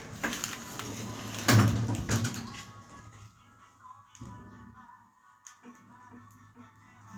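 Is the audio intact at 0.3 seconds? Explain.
Yes, the sound at 0.3 seconds is intact, with no fault present at that moment.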